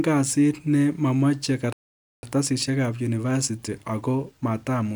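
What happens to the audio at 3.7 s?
At 3.7 s the speech is inside a stretch of time-compressed catch-up that begins at 2.23 s, right after "kasit ne momochei", and runs to the end of the clip. After a stall the player is clearing its backlog by removing short slices and cross-fading across the joins, so delivery runs about 1.1 times fast at unchanged pitch. On a spectrogram, harmonics hold their spacing while syllables shorten; the waveform shows tightened envelopes and small splice irregularities.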